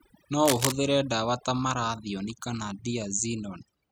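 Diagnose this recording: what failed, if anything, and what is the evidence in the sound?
Overdone noise removal runs through the whole speech clip, a processing-stage fault in the call or cleanup chain. The suppressor was set so aggressively that any frequency band near its noise estimate is driven down or cut outright, taking low-level parts of the voice with it. The background collapses to near silence sprinkled with twinkling specks. A spectrogram shows a blotchy, holed texture with isolated bright dots between phrases.

Cable scratch noise appears from 0.45 to 0.72 s as a dense, uneven burst of scratching and rustling at roughly the same level as the speech. The likely cause is a worn cable, connector or control being moved in the analogue wiring, so its contact resistance fluctuates rapidly and injects bursts of noise. On the waveform this shows as a ragged, spiky cluster over that quarter-second. 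On a spectrogram it is an irregular broadband smear.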